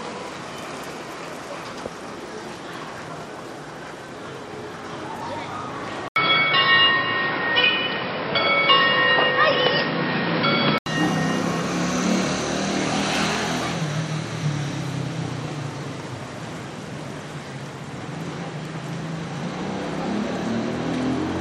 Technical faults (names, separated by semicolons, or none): input switched to a poorer device